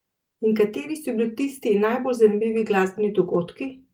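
Nothing stood out on listening to this speech recording.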